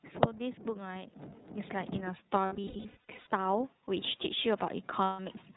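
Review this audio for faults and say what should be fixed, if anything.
iLBC codec, throughout the 5.565 s: the speech is band-limited to narrowband, with nothing above 4 kHz, and has a plainly audible rough, slightly synthetic texture. iLBC codes each frame's excitation independently rather than predicting from the previous frame. The character here fits the lower-rate 30 ms mode at 13.33 kbps. To prevent it, capture or transmit with a wideband codec such as Opus.

Lost iLBC frames, from 2.46 to 3.27 s and from 5.04 to 5.19 s: in the first stretch, losses totalling about 570 ms are scattered across roughly 810 ms, with the longest single gap around a tenth of a second. The second is a continuous 150 ms loss. At each dropout the decoder repeats the last pitch cycle mixed with noise, so the gaps sound like a held, buzzy vowel, and clean speech returns almost immediately afterwards. To prevent it, reduce packet loss on the network path or add forward error correction and a larger jitter buffer.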